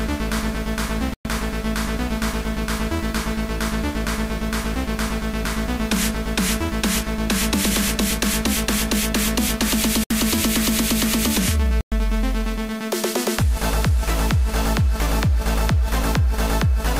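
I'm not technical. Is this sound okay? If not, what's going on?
No. The sound cuts to brief silence three times: at 1.14 s for about a tenth of a second, at 10.04 s for about 70 ms, and at 11.81 s for about a tenth of a second. Each is likely a Bluetooth stall, where wireless interference delays audio until playback briefly runs out.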